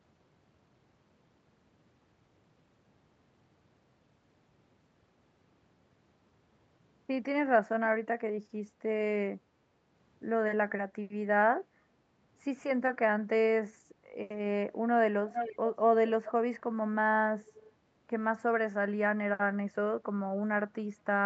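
Echo leak, from 15.28 to 15.58 s in this speech recording: a delayed copy of the talker returns about 450 ms behind the original, roughly 5 dB quieter than the direct speech. The likely cause is a far end playing the call over a loudspeaker, where the echo canceller failed to fully remove what its microphone picked up and sent it back. The band-limiting to 8 kHz comes from the normal call path.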